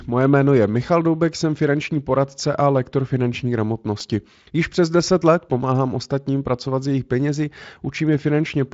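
Just after "poradce a lektor finanční", from 3.60 to 4.27 s, six CD scratch ticks sound at a steady rate of roughly seven or eight a second. On each turn of the disc a blemish wiped out more data than error correction could repair, so the player patched the gap. On a waveform each appears as a brief notch or spike lasting a millisecond or so. On a spectrogram each is a thin vertical line reaching up to the speech's upper limit near 7.7 kHz.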